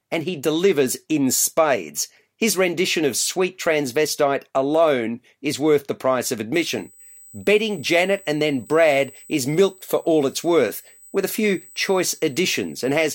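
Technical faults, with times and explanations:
6.54 to 13.14 s, USB whine: right after "worth the price of", a thin, steady 8 kHz whistle rises to roughly 25 dB below the speech and holds to the end. The 125-microsecond microframes of a USB bus pull current in bursts that leak through the power or ground into the audio path.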